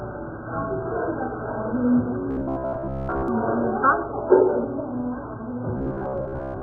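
From start to finish the sound is dull and smeared, with a fizzy, warbling texture on sustained parts. This heavy damage is likely AAC compression, with the hearing-model quantiser starved of bits in a way that fits roughly 8 kbps AAC-LC.

From 2.31 to 3.28 s, and again from 5.77 s to the end, the audio becomes a rigid, metallic buzz at about 66.7 Hz. This is robotic sound, likely from repeated short buffers: roughly 15 ms slices are replayed over and over, covering most of each span while the real audio is skipped.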